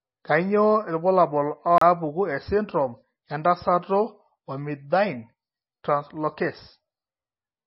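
Across the whole speech clip, an encoder starved of bits has likely squeezed the audio through MP3 compression, and the damage is heavy. The treble is gone above 5.6 kHz, which fits a low bitrate around 24 kbps. The encoder has also thrown away weak frequency lines that flicker in and out between frames. The speech sounds dull, watery and swirly, with metallic chirping on s sounds and smeared consonant attacks.

From 1.78 to 1.81 s there is a CD skip. The laser lost its track and landed on a different turn of the disc's spiral, so the player muted briefly and resumed from another point. It is heard as a short drop-out of roughly 30 ms, with an abrupt jump in the speech, just before "esindirom entasato".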